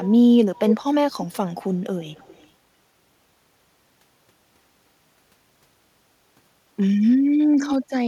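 Echo leak at 0.03–0.1 s, 0.56–0.76 s, 2.12–2.48 s and 7.59–7.76 s: the speech returns about 0.3 s late, likely from a loudspeaker echo canceller passing part of what it picked up. The copy is barely audible at 2.12 s and nearly as loud as the speech at 0.56 s.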